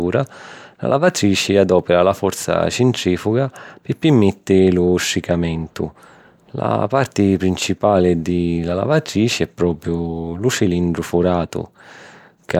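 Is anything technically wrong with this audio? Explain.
No, no technical faults heard.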